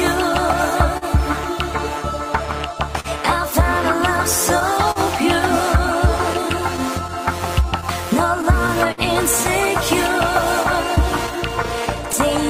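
Small, uneven timing hiccups recur through the whole clip. This is clock drift between sender and receiver: the sender's clock runs roughly 3 percent slow, so the receiver keeps stretching sound to cover the shortfall.

At 0.97–1.04 s, 3.00–3.07 s and 4.91–4.98 s, the sound is briefly held with a slight buzz or dip. Each is a short stall from a late packet, where about 40 ms was stretched until the packet arrived, with nothing lost.

From 6.33 to 9.00 s, around seven brief ticks and smears appear, the longest about 50 ms. These are scattered short gaps, where late or lost packets were patched by continuing the previous sound.

From 10.95 to 12.16 s, about four shorter hiccups follow, each only around 15 ms or less. These are more scattered short gaps, concealed the same way.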